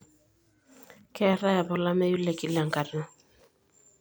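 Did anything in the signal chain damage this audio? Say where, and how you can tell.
Yes. At 1.33 s the speech jumps, and a few milliseconds of sound are missing. There is no gap of silence. This is likely a dropped buffer (overrun) at the driver stage, where unread samples were overwritten and the remaining audio was spliced together.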